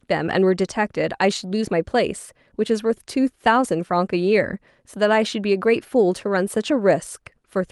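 A short stretch of speech with nothing technically wrong to point to anywhere along it.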